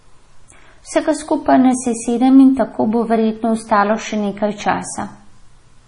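Heavy MP3 compression, likely at a bitrate around 32 kbps, leaves nothing above 10.6 kHz throughout, so the speech sounds dull, watery and swirly.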